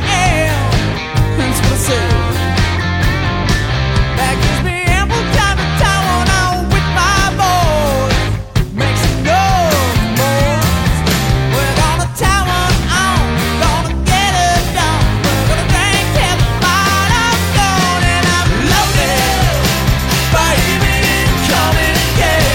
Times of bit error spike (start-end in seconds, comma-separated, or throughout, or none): 20.33